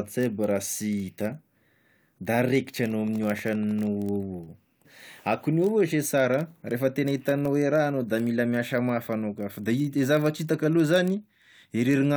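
A block size mismatch with zero padding runs through the whole speech clip. One stage writes shorter blocks than the next one reads. Each block ends in a short stretch of silence. That gives a steady buzz at 43.1 Hz, which fits a 1024-sample read block. The speech runs only slightly slow, at 0.999 times normal speed, with its timbre unchanged.

From 2.84 to 3.88 s, a train of clicks sits over the speech. About fifteen clicks arrive at a regular 12.6 per second. They are roughly as loud as the speech itself and sound like a sharp, even ticking. Interference from nearby equipment or a faulty connection is the likely cause.

At 4.84 s, a stream segment is skipped. The sound jumps abruptly ahead with a small blip, and a piece of the speech is missing. The likely cause is a segment of the stream that failed to load, so the player moved on to the next one.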